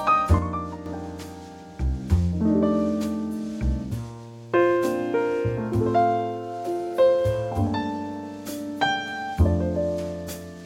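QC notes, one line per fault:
0.39–0.86 s, sudden gain jump: the level drops by about 6 dB in a single step at 0.39 s and returns just as abruptly at 0.86 s, with no fade in either direction. The sound and its background noise fall and recover together, which marks this as a change in digital gain rather than in the source itself. The likely cause is a gain setting, or a one-bit shift equal to halving the amplitude, applied and then removed without a ramp.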